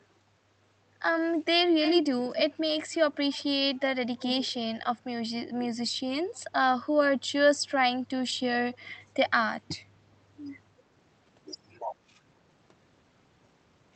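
At 1.81–1.99 s, 6.35–6.40 s and 8.74–8.99 s, copies of speech return 247 ms late, strong at first, then faint. This is echo leak, likely from a loudspeaker echo canceller missing pickup. It is discrete and delayed, unlike reverb's smooth tail.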